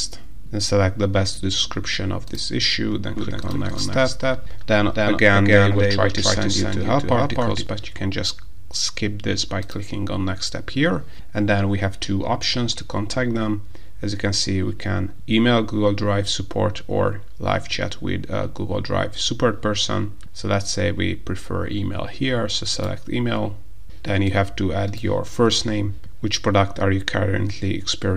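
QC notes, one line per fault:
3.17–7.67 s: doubled audio track. A second full-band copy trails the sound by about a third of a second, about 5 dB quieter, likely from a slower second capture path or a misaligned edit. Unlike an echo or reverb, it has no decay or room colour and starts and stops abruptly.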